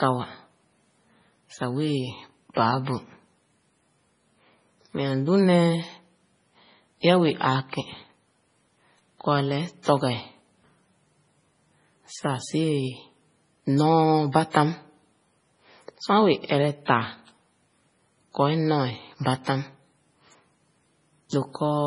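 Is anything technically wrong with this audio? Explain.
Yes, there are two problems. Across the whole clip the speech has a watery, swirly texture, with a hard ceiling at 10.5 kHz: there's nothing above it, so the top end sounds dull. S sounds come out metallic and chirpy. That's likely heavy MP3 compression, and the damage fits a low bitrate of around 24 kbps. When bits run out, the encoder chops the treble and drops weaker frequency lines, which flicker on and off from frame to frame.

There's also pre-echo at 2.54 s, 16.85 s and 21.30 s. Each time, a short hiss of about 28 to 31 ms sneaks in just before a sharp attack, and the attack itself lands soft and smeared. It comes from the same coding. The quantisation noise gets spread evenly across a whole block. When a sudden onset sits late in that block, noise sized for the loud part leaks into the quiet moment before it.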